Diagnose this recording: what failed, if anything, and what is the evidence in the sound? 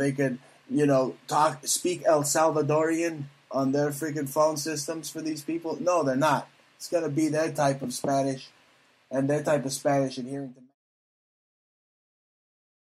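Nothing in the signal chain has failed: there is a smooth, deliberate fade-out that begins around 10 s and reaches silence at 10.75 s, with no click or hard edge.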